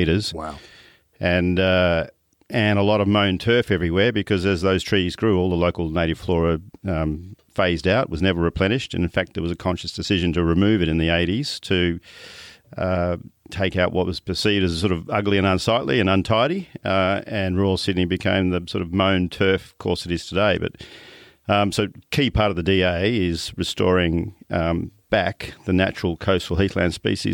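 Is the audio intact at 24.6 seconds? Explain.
Yes, the speech at 24.6 seconds plays through intact, with no dropout, click or distortion at that moment.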